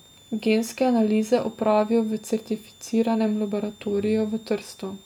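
A switching power supply somewhere in the chain is running in an audible burst mode, or beating against a second supply, and its switching noise leaks into the audio for the whole clip. The result is a switching supply whistle: a thin, high tone wandering between about 3.5 and 3.7 kHz. It sits roughly 30 dB below the speech.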